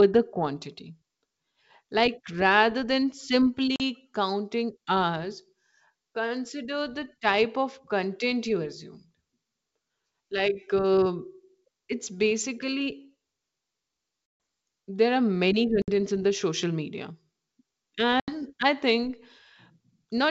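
Packet loss on an ADPCM call leaves hard-edged silent holes at 3.76 s (40 ms), 14.26 s (140 ms), 15.82 s (60 ms) and 18.20 s (80 ms), each a few packets' worth. The decoder's predictor and step size lose track of the sender's, so the speech returns slightly distorted. On a spectrogram these gaps are blank vertical strips, and in the waveform the signal drops abruptly to flat.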